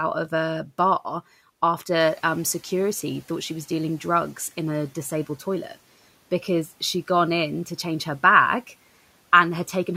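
At 2.0 s the noise suppressor is caught catching up. Its noise estimate lags the room noise that jumps by about 12 dB around then, so the noise comes through with less reduction at first before sinking by about 7 dB as the estimate adapts over two seconds, until 4.0 s.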